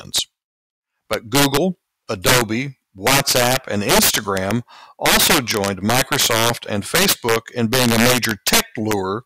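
Speech with integer overflow throughout: driven about 9 dB too hot, about 3 percent of samples wrap to the opposite sign, giving violent cracks far harsher than clipping's flattened tops.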